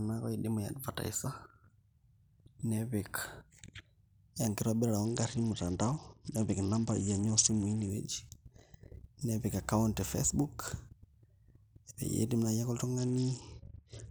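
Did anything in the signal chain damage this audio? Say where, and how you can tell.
Yes, at the codec stage over a Bluetooth link: a Bluetooth SBC bit pool drop from 5.05 to 7.89 s, and again from 12.98 s to the end. In both stretches the speech loses its treble and takes on a gritty, grainy noise. That points to the bit pool falling from about 28 to 8, roughly 72 kbps. Starved of bits, the encoder leaves the top sub-bands empty and quantises the rest coarsely. On a spectrogram the upper band goes blank, with speckled noise below it.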